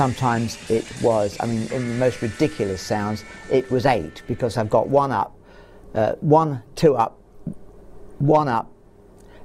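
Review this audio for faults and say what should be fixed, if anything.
Nothing here needs fixing; no faults are audible.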